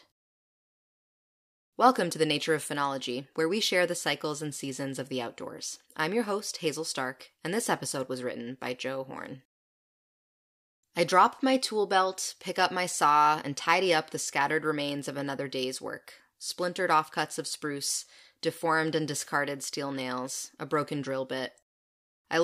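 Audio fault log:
Nothing in this speech recording stood out as a problem on careful listening.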